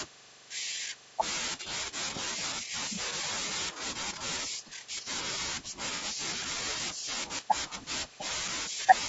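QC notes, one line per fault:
Throughout, low-delay AAC compression: speech sounds rough and grainy, likely from AAC-ELD around 32 kbps; coarse quantization at this low bitrate leaves noise between harmonics, and the spectrogram shows noise filling the gaps between them.
5.96–6.04 s and 8.63–8.68 s, AAC frame loss with concealment: brief smeared, noisy patches where the decoder rebuilt missing audio from the last good spectrum. They show as blurred vertical smudges, the first fitting two lost frames.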